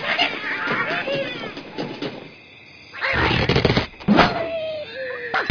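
No technical faults are audible.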